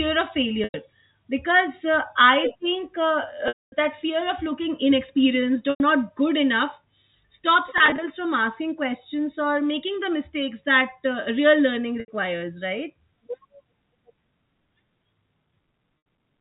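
Packet loss with pitch repetition at 0.64, 3.48, 5.7, 7.78 (scattered drops), 12.0 and 16.01 s: lost audio is bridged by a repeated pitch period. It sounds buzzy and held, and shows as flat, comb-like harmonic stripes that fade out at 3.48 s.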